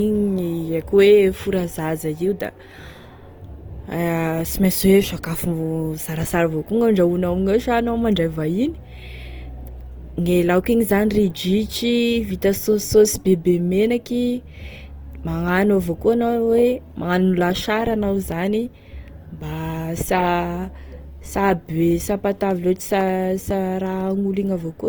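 A speech recording with audible codec damage running through its whole length. The sound is grainy and rough rather than swirly, and the upper band is filled with a noisy texture while the audio still extends to about 20.1 kHz. That combination points to Opus compression, likely in its music (CELT) mode at a low bitrate around 24 kbps. At that rate the encoder keeps each band's energy but cannot spend enough bits on fine detail, so it substitutes folded or noise content. From 22.01 s to 24.01 s there is a run of periodic USB or driver dropouts: about five short ticks spaced every 0.5 s, each a gap of roughly a millisecond where the signal falls to silence. The steady spacing matches a background process stalling the bus or audio driver on a fixed schedule. Each stall drops a sliver of samples, and the resulting discontinuity is heard as a click over the speech.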